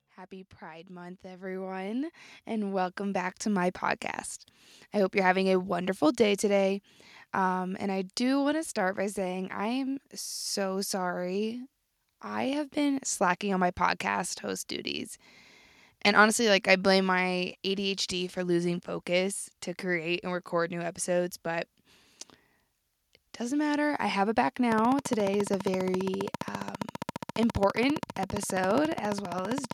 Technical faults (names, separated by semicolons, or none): automatic gain rising; train of clicks